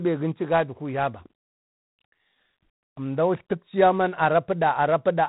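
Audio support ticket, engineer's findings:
G.726 ADPCM throughout. Harsh rasping hiss tracking speech level; fits 24 kbit/s. Spectrogram: nothing above 4 kHz, noise floor rising with each syllable.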